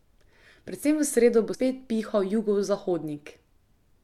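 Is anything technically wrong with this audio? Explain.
Yes. At 1.53 to 1.55 s the speech is briefly disrupted. This is damaged data in a compressed stream: corrupted bytes there make the decoder misread those frames, lose sync and hunt for the next valid frame header before playback recovers.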